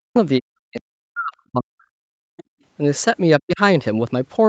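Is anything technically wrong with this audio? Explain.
Yes. The speech gets pushed down whenever the far end talks over it, and a trace of that far-end voice slips through once.

Speech suppressed in double talk shows up three times: 0.00 to 0.16 s, 0.40 to 2.24 s, and 3.43 to 3.60 s. The long middle stretch is the worst, with roughly a second and a half of the talker chopped away. This is likely the echo canceller failing to tell the local talker from loudspeaker echo, so it ducked everything. The voice drops by as much as about 40 dB, close to vanishing.

The other side's voice leaking through is a brief scrap from 2.37 to 2.44 s. It sits around 25 dB below the talker, so it's faint. It's likely residual echo that the canceller didn't fully scrub from the microphone signal after the loudspeaker played the far end. The top end stops at 8 kHz, which fits a wideband call path running Opus at something like 64 kbps, and that limit isn't a fault.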